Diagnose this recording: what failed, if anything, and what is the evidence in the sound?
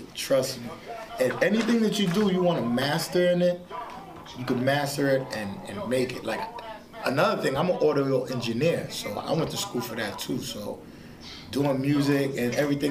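No failure detected anywhere.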